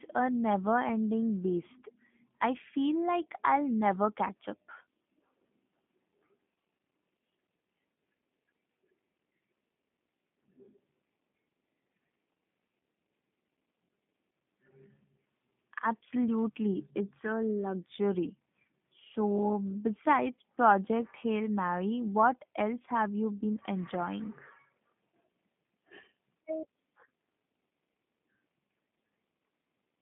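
From start to finish it's G.729 coding, which fits an 8 kbit/s line: nothing above 3.7 kHz, band roughly 150 Hz to 3.5 kHz, speech rough and synthetic.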